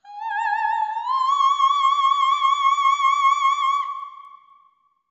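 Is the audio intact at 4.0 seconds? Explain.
No. At 4.0 s the audio sits inside a stretch from 3.5 s to 5.1 s where the resampler restarted on every block. The conversion from 16 kHz to 48 kHz was done one 250 ms block at a time, so at each block edge the converter lacked the real neighbouring samples and left a small error. These errors are heard as regular ticks at 4 Hz, present only while there is signal.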